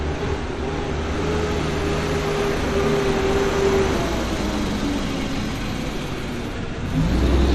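Brief glitches break through the sound three times, at 0.88 to 0.91 s, 3.90 to 3.95 s and 6.55 to 6.58 s, each lasting roughly 30 to 45 ms. These are damaged data in a compressed stream. At each point some bytes of the encoded file were lost or corrupted, so the decoder misread those frames, lost its place in the stream, and had to hunt for the next valid frame header before clean playback resumed.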